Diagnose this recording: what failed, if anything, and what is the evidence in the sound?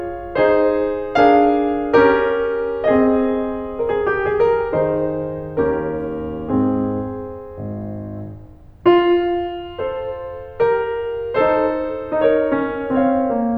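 Nothing failed in this music recording, and no stage of the chain shows a problem. The sound offers no evidence of anything going wrong, so there is no mechanism to diagnose.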